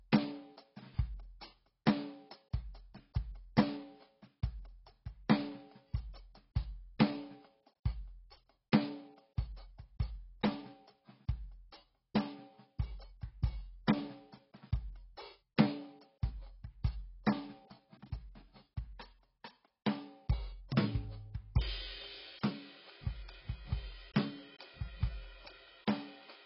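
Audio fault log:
Throughout: heavy AAC compression damage. The music sounds dull and smeared, with warbling, fizzy sustained tones. A spectrogram shows nothing above a hard ceiling at 5.6 kHz. This is likely AAC-LC starved of data, pointing to around 16 kbps.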